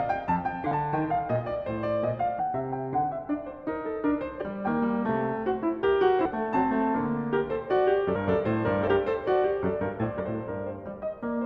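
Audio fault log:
0.71, 2.39, 4.41–4.44, 6.25–6.28, 8.15, 8.87 and 10.19 s, compressed frames skipped: the music jumps ahead each time, by roughly a tenth to half a second, in whole 20 ms frames, so whole frames were dropped.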